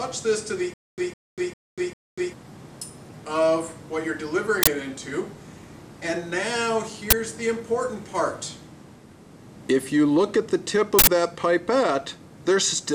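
From 0.74 to 2.33 s the stream likely stalled and replayed its last fragment. The result is a stutter with silent gaps: a 157 ms burst repeats four times, each followed by about 242 ms of digital silence. An uninitialised buffer, where leftover memory played as samples, then causes loud cracks or digital noise bursts at 4.63 s (43 ms), 7.10 s (21 ms) and 10.99 s (85 ms), which fits 2048-, 1024- and 4096-sample blocks.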